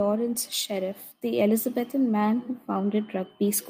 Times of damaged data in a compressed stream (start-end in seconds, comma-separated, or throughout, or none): none